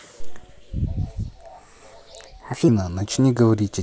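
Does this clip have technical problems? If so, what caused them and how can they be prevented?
Yes. From 0.86 to 2.68 s, a section at the wrong speed plays 1.27 times too fast. The speech becomes hurried and rises about four semitones, then returns to normal pitch and pace. The likely cause is that segment being clocked or resampled at the wrong rate during editing or playback. To prevent it, make sure every segment matches the project's sample rate and playback clock before rendering.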